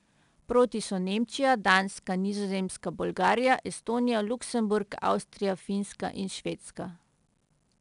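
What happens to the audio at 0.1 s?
At 0.1 s you're already hearing 4-bit ADPCM compression, which runs through the whole clip. Each sample is coded as a coarse step from a prediction, so a gritty hiss rides on the louder speech and sharp onsets crunch. Nothing reaches above 10.6 kHz, which fits a stream of around 89 kbps.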